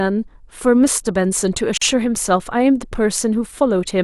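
The speech was encoded as separate pieces that were then joined without trimming the encoder padding, and the result is a gap at a join of encoded pieces at about 1.77 to 1.82 s. The start-up delay of one encoder run and the padded final frame of the previous run both remained, leaving a gap of roughly 43 ms cutting into continuous speech. Its edges are smeared by the codec, and the speech resumes exactly where it broke off.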